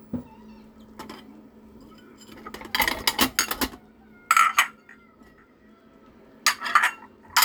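No technical faults can be heard at any point in this recording of sounds.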